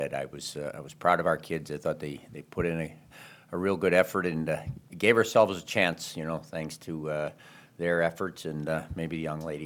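No technical faults can be heard anywhere in the audio: the signal holds steady with no breaks, distortion, level jumps or other disruptions at any point.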